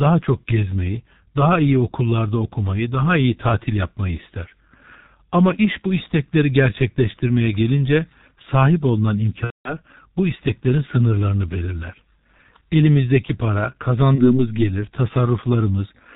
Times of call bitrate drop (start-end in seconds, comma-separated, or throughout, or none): none